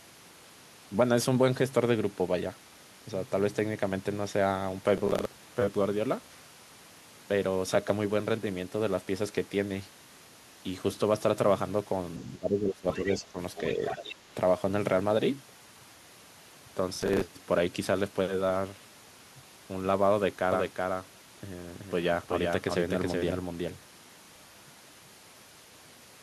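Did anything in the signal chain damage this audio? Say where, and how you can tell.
Yes, in a few places. First, the driver or buffer stage: there are short bursts of processor overload crackle at 4.98 to 5.35 s, 16.95 to 17.22 s and 24.25 to 24.51 s. Each is a gritty tearing of roughly a quarter to four tenths of a second, made of tiny repeated slivers of old audio with hard edges. That's a run of a dozen or more missed deadlines in a row, and the grain fits buffers of roughly 10 ms.

Then the call processing, around 12 to 14 s. From 12.24 to 13.38 s the talker's speech dips hard, by around 15 dB at its worst, in patches that add up to well over half a second. A shallower dip of a few dB follows from 13.74 to 14.0 s. That's speech suppressed in double talk. The likely cause is the echo canceller failing to tell the near talker from loudspeaker echo while both sides spoke, so it ducked everything.

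In that same stretch you can hear the other side's voice leaking through, in three scraps: 12.91 to 13.19 s at about 20 dB under the talker, 13.55 to 13.69 s at about 15 dB under, and 13.86 to 14.15 s at about 10 dB under. Most likely the canceller didn't fully remove the far end playing from the device's loudspeaker before it reached the mic.

Last, from 20.52 s right to the end there's a doubled audio track. A second full-band copy trails about 400 ms behind, only about 5 dB quieter. It has no room colour or decay, and it starts abruptly. That points to the same signal being mixed in twice, likely through a second, slower capture path or an out-of-step edit rather than any acoustic echo.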